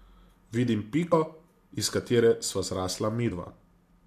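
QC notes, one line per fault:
1.12 s and 3.30 s, damaged data in a compressed stream: two brief glitches, each about 12 to 14 ms long, cut sharply into the speech. A stretch of the compressed data is corrupt at each point, so the decoder misreads those frames and loses sync until it locks onto the next valid frame header. That momentary garbage becomes the short glitch.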